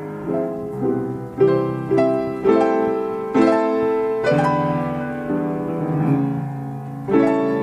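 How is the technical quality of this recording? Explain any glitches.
No glitches to report: the recording runs without any dropouts, clicks, distortion or other transport or processing faults.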